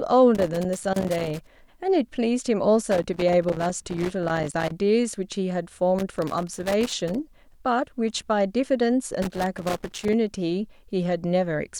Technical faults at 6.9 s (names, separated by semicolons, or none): loose connector crackle